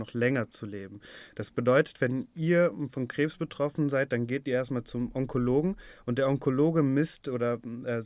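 Listening to this speech recording, nothing technically amiss stood out at any point.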